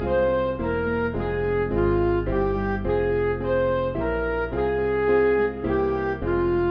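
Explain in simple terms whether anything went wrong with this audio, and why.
Nothing went wrong with this audio; there's no fault to point to anywhere in it.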